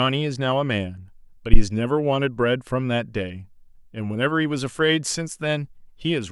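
A phantom power thump hits this speech recording from 1.53 to 1.63 s: a deep, low-frequency knock that peaked at about 0 dBFS at the input, driving the input to full scale. It happens when the microphone supply is switched while the input is live, so the sudden voltage step passes through the coupling capacitors as a single surge. That surge dies away quickly, with a decay of about 21 ms, before the recording settles back.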